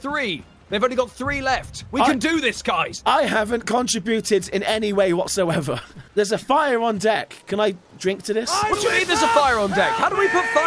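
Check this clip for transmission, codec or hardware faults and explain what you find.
Nothing in here points to a transmission, codec or hardware problem; it all comes through without a hitch.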